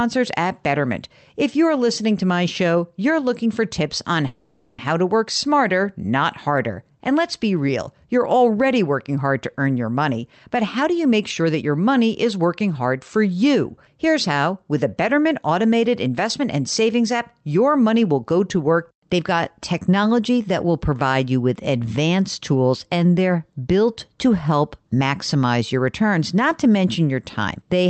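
At 4.27 s, just after "looking for tips on", packets were likely held up in transit and the jitter buffer ran empty. This call audio freeze lasts about 0.54 s: a fading buzz or hiss stretches the last sound, then "to work smarter not" resumes with nothing lost, only delayed.

Three jitter buffer speed-ups follow. In each, the buffer had built up more audio than its target, and the receiver trimmed pitch-period slices to cut the backlog:

At 10.11 to 11.63 s, the speech runs 7 percent fast.

At 19.14 to 20.70 s, between "to work" and "provide you with advanced", it runs 8 percent fast.

At 25.02 to 26.02 s, between "they're built to help" and "not to", it runs 7 percent fast.

The pitch stays the same throughout, but delivery sounds briefly hurried.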